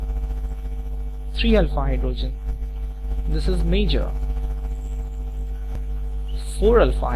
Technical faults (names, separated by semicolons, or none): none